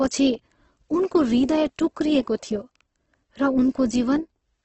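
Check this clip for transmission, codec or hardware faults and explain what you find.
One codec fault runs through the whole speech clip. The cause is likely Opus compression starved of bits, consistent with about 12 kbps in its music mode, filling bands with folded or noise content. The speech sounds heavily grainy and rough, with nothing above 8.2 kHz.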